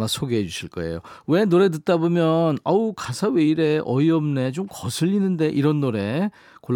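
No technical faults can be heard anywhere in the recording.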